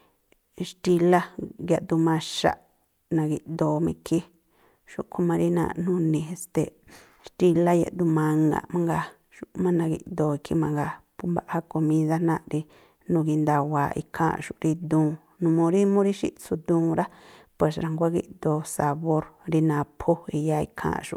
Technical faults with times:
none

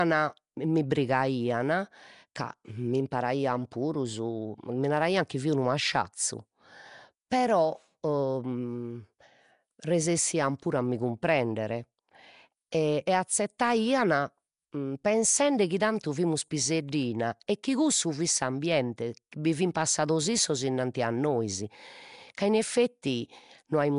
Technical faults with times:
0.00-23.98 Nellymoser compression

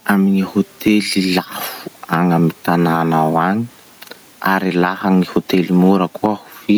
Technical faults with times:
0.00-6.77 gain pumping

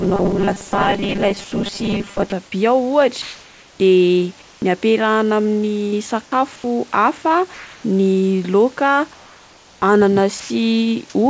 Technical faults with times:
0.01-2.32 robotic sound from repeated short buffers
1.44-1.52 sound dropped by the voice detector
3.22-3.80 comfort noise in place of the background
4.42-4.62 comfort noise in place of the background
6.26-6.32 sound dropped by the voice detector
6.56-6.64 comfort noise in place of the background
7.54-7.84 comfort noise in place of the background
9.14-9.82 comfort noise in place of the background
10.40-10.50 sound dropped by the voice detector

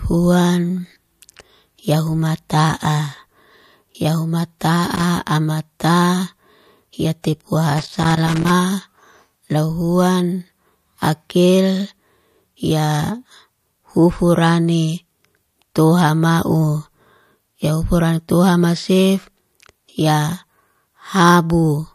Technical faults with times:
4.59 pre-echo
4.95-5.04 loose connector crackle
7.22-7.24 pre-echo
7.78-8.50 loose connector crackle

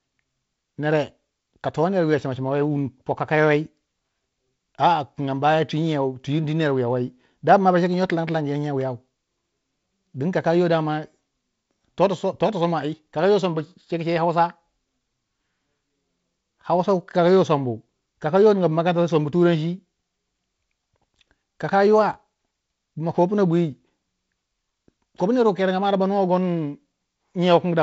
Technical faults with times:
8.81 electrical switching spike

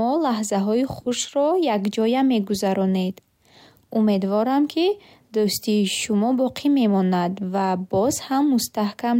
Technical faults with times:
none

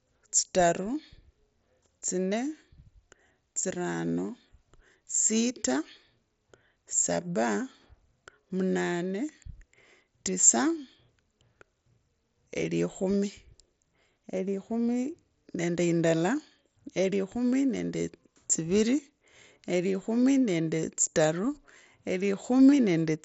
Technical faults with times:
none

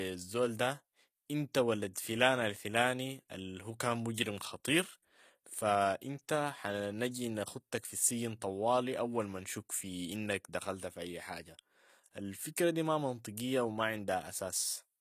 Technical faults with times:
0.00-15.00 HE-AAC compression

